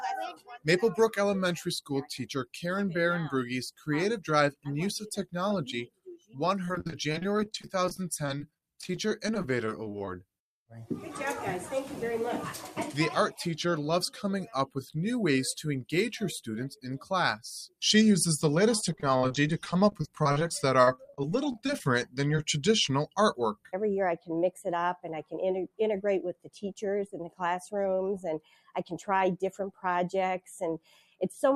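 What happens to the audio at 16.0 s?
At 16.0 s you're hearing the noise suppressor applied to music or sounds, which runs through the whole clip. A speech-tuned suppressor treats the sustained parts and tails as noise, ducking them by around 5 dB while attacks pass, so the sound pumps and thins.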